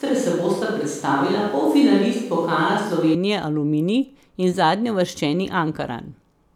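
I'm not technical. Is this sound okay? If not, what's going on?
No, not entirely. From the very start up to about 3.1 seconds, the speech sounds roomy and a bit hollow, with thinner bass and faint background noise. Then it snaps back to a close, full sound. That's a switch to a distant microphone: the close mic's signal likely dropped out, so that stretch was picked up by a mic further away. Oddly, the loudness barely changes; it's the tone and room sound that shift.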